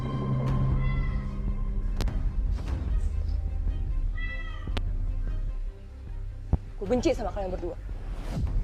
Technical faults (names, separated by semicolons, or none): loud pop